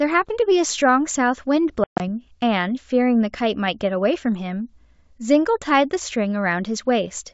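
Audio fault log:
1.84–2.01 s, packet loss on an ADPCM call: a hard-edged silent hole, 150 ms lost across 160 ms with a longest gap of 130 ms, then an unsteady re-entry while the G.722 decoder's predictor and step size drift back into step with the sender's.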